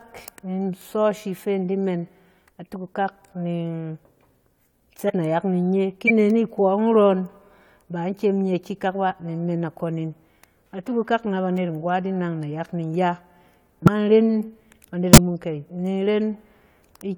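Compressed frames are skipped at 5.06, 6.07, 13.85 and 15.13 s, jumping ahead by about 70, 70, 100 and 150 ms as whole frames go undecoded. Each join is a sudden jump in the speech, and the spectrogram shows an abrupt break in the speech harmonics.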